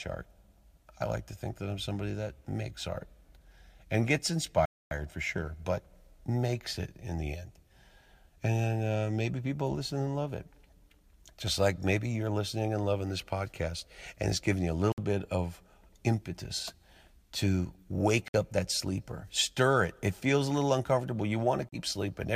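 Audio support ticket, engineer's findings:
Bluetooth stall, four dropouts to silence: 4.65–4.92 s (about 257 ms gap, between "and gets" and "for sure but makes"), 14.92–15.00 s (58 ms), 18.28–18.35 s (58 ms, "to wake" / "up that sleeper stir"), 21.69–21.77 s (38 ms, after "feels a little uncomfortable"). Likely RF interference delaying packets; headset buffer underran, playback paused until retransmits landed, then resumed.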